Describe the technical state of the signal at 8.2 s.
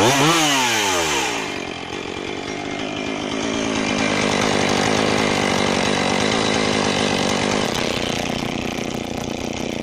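At 8.2 s the signal is inside a block size mismatch (padded) running from 7.65 s to the end. Each read block, which fits 512 samples, is only partly filled and padded with zeros, so an 86.1 Hz buzz appears and the audio plays at 0.625 speed. The waveform shows regular flat gaps, and the spectrogram shows vertical stripes spaced at the block rate.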